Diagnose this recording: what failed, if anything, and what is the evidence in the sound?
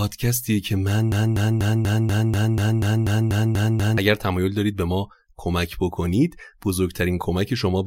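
From 1.12 s to 3.98 s the speech sticks: a fragment about 0.24 s long plays twelve times in a row, each repeat identical and butted straight against the next, so the audio stutters in place before normal flow resumes. This is a broken-record loop, most likely from a stalled playback or stream buffer that kept re-sending the last block it held. Whatever should have been heard during those nearly three seconds is missing.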